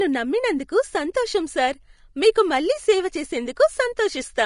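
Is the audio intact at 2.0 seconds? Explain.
No, at 2.0 seconds the speech sounds hissy and grainy, with nothing above 10.5 kHz throughout, likely Vorbis compression at a low bitrate around 36 kbps coarsely quantising the treble.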